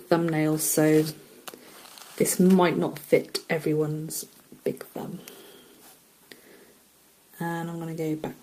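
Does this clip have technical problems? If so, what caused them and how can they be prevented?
No, nothing in this audio points to a technical fault, so there is no cause to trace and nothing to prevent.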